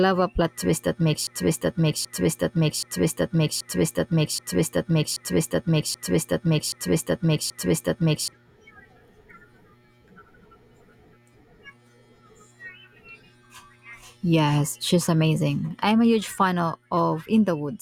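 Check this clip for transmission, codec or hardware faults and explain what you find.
There is one fault, a broken-record loop. From 1.27 to 8.33 s, after "a plot twist that", playback likely stalled, repeating one 779 ms fragment nine times back to back and losing the speech meant for that span.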